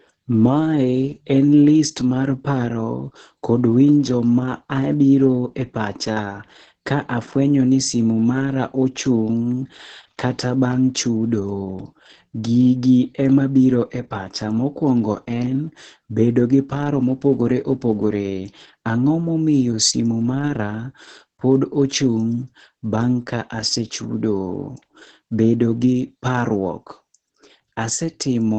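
From start to finish the speech carries heavy Opus voice compression. Nothing comes through above about 8.8 kHz, so it sounds muffled, and the coarse excitation coding makes it hoarse and a bit robotic, which fits the SILK coder running around 10 kbps.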